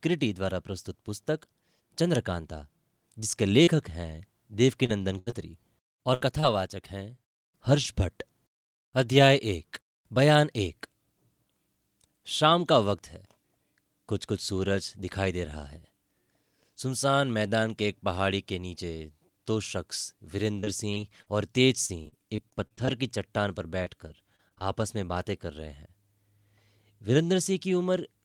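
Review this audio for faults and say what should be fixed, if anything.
Repeated packet loss (robotic sound) occurs from 3.63 to 6.44 s and from 20.60 to 24.62 s. Lost audio is bridged by stretching the preceding sound, so the speech turns choppy. Unlike a single dropout, the gaps recur in quick succession, the longest about 78 ms and 40 ms. A larger jitter buffer and forward error correction on the network link would prevent it.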